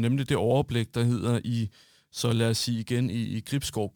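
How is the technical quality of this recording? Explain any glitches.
The recording is marred by one fault across its full length. A faint hiss and roughness rides on the speech, strongest on loud and sibilant sounds and gone in pauses: sample clock jitter, where a clock wavering by a few microseconds mistimes samples, leaving error roughly 30 dB below the signal.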